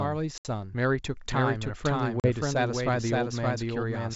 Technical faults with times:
0.00-4.16 doubled audio track
0.38-0.46 packet loss on an ADPCM call
2.20-2.32 packet loss on an ADPCM call

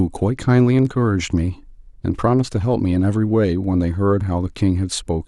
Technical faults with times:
none

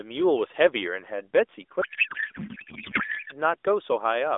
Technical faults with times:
1.82-3.32 codec payload misread

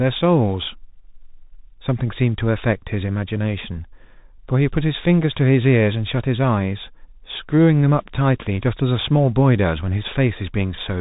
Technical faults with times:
0.00-11.01 Bluetooth CVSD headset codec

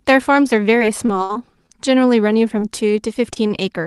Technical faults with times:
0.75-1.71 repeated packet loss (robotic sound)
2.59-2.63 short concealed packet loss
3.34-3.38 short concealed packet loss
3.48-3.52 short stall from a late packet

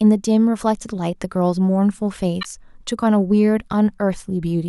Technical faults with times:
2.41-2.46 corrupt frame decoded

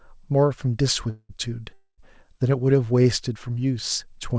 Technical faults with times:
1.10-1.31 call audio freeze
1.73-2.00 call audio freeze
3.02-3.06 short stall from a late packet

